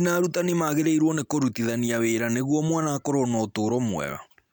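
No technical faults can be heard anywhere in this speech recording. There is nothing in it that calls for a timestamp.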